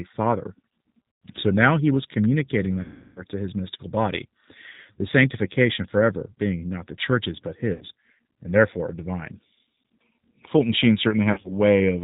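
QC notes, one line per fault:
throughout, G.729 codec: The speech has the rough, somewhat synthetic texture of G.729A at a rate that fits an 8 kbit/s stream, with plainly audible codec damage and nothing above 4 kHz. Each 10 ms frame is rebuilt from a vocal tract filter, a pitch predictor and a few pulses. A plain low-pass or wideband codec would not produce this, because the roughness comes from the sparse pulse excitation.
1.30, 2.81–3.23, 7.74–7.84, 11.32–11.52, VoIP packet loss concealed by the speech codec: The first three gaps last 110 ms (just before "so now he was"), 350 ms (between "now he was communicating" and "to his mystical body") and 70 ms (between "not the church's but" and "and therefore divine"). The last is 100 ms lost across 120 ms, with the longest run 50 ms. The decoder extends its last pitch and filter at falling gain, so each gap becomes a fading buzzy tone or coloured noise instead of silence, and recovery lags after packets resume.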